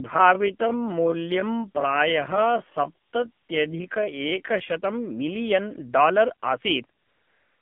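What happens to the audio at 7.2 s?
AMR comfort noise covers 7.2 s, running from 7.00 s to the end of the clip at 7.62 s, just after "मिलीयन् डालर् आसीत्". The phone stopped sending speech frames for that last 0.6 s, and the receiver filled the gap with synthetic noise, so the real background gives way to a steady, smooth hiss that switches in abruptly.

The AMR narrowband mobile codec is also present here, as it is throughout. The line passes only about 150 Hz to 3.5 kHz, so the sound is thin and muffled. Plainly audible buzzy, synthetic coding damage fits a low AMR-NB mode near 7.4 kbps.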